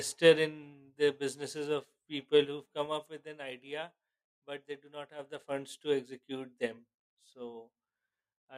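A speech clip with zipper noise: from 2.35 to 3.22 s a ticking, zipping texture rides on the level as it drops by roughly 15 dB, and again from 5.14 to 5.57 s as it climbs back about 15 dB. The gain moves in unsmoothed 3 dB steps, each one clicking.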